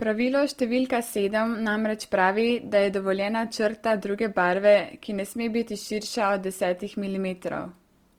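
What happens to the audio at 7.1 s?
Opus compression is what you hear at 7.1 s, as it is throughout the whole clip. The speech keeps its full bandwidth, reaching about 20.3 kHz, but the encoder is holding band energies while filling detail with folded or noise-like content, so voiced sounds come out grainy, rough and noisy, with few spectral holes and less swirling than MP3. The damage is plainly audible and likely comes from Opus in its music mode at a low rate, fitting roughly 24 kbps.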